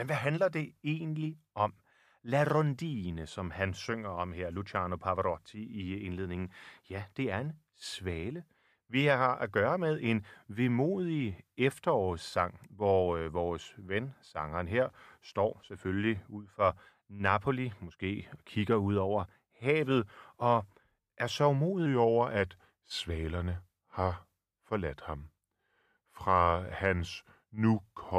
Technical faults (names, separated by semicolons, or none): wrong sample rate